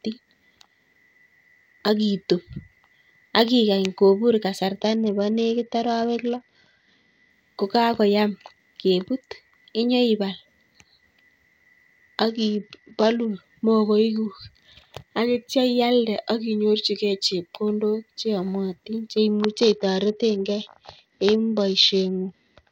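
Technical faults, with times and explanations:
4.81–7.30 s, 12.29–13.30 s and 19.32 s to the end: Bluetooth SBC bit pool drop. Treble turns dull and gritty noise rises as the congested link starved the upper sub-bands, consistent with a bit pool falling from 28 to 8, around 72 kbps.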